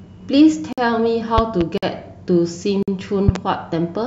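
The speech arrives in one-second chunks, and a 50 ms silence opens at each join. This leaves hard-edged holes of gap between chunks at 0.73 to 0.78 s, 1.78 to 1.83 s and 2.83 to 2.88 s. Nothing is lost; the speech simply resumes late. Between 1.38 and 1.63 s, and again from 3.28 to 3.38 s, a loud pop appears as a pair of sharp clicks around 15 dB above the speech, which continues underneath. This is likely a voltage step from a switch, plug or driver glitch.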